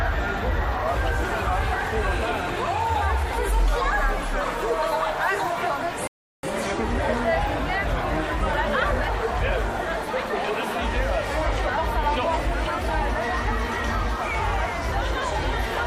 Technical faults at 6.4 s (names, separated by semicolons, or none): rebuffering stall